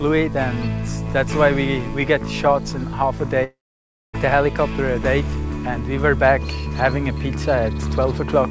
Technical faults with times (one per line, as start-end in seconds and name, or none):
3.44-4.15 long network dropout